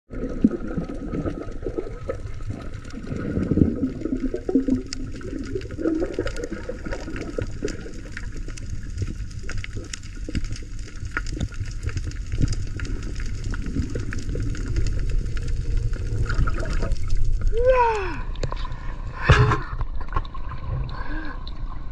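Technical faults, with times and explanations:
No technical faults detected in the audio.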